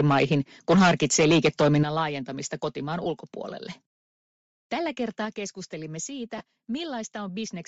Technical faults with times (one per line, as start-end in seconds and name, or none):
0.00-7.67 Bluetooth LC3 compression
0.00-0.35 microphone overload
0.69-1.83 microphone overload
1.83 microphone volume stepped down
3.03-3.06 lost LE Audio frames
5.25 microphone volume stepped down
6.38-6.41 lost LE Audio frames